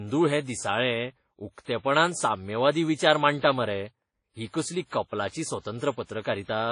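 Throughout, the speech sounds dull and doubly smeared, with nothing above 10.1 kHz, likely from transcoding between lossy codecs: a low-rate WMA encode re-encoded as Vorbis.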